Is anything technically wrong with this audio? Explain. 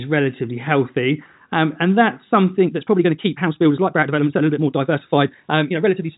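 Yes. From 2.62 s through to the end of the clip, the speech is a time-stretched section that's been squeezed, running at about 1.72 times its normal pace. The cause is likely software forcing that stretch to fit a shorter length, holding the pitch steady by dropping short slices of the audio. So the pitch stays put while the pace jumps abruptly, and the speech comes out rushed. All of this sits inside a telephone-style band that stops around 3.8 kHz.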